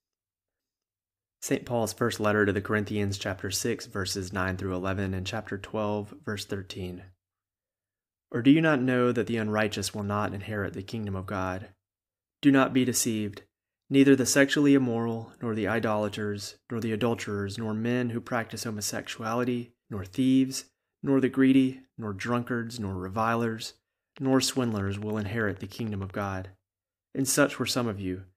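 A speech recording in which something in the signal path, likely interference from nearby equipment or a faulty connection or power supply, injects a train of clicks. Right after "nor drunkards nor revilers", from 24.18 s to 26.19 s, evenly spaced pulses arrive at 13 per second, around thirty in all, each reaching roughly the level of the speech itself. They sound as a steady ticking laid over the talking and the pauses alike.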